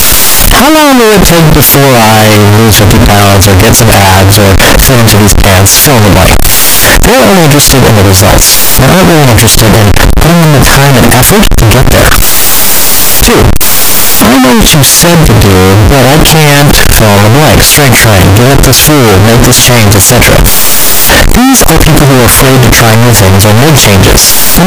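A speech recording runs for its full length under a wall of loud, harsh distortion, with pauses and soft syllables as loud as the strongest passages. The pattern points to signed and unsigned mixed up, most likely 16-bit samples read with the wrong sign convention. That inverts the top bit, so every crossing through zero turns into a leap across the entire sample range.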